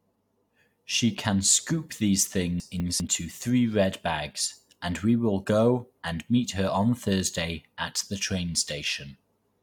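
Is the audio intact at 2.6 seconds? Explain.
No, from 2.6 to 3.0 s the speech jumbles: chunks out of order, where one 200 ms chunk plays one chunk late, leaving hard joins.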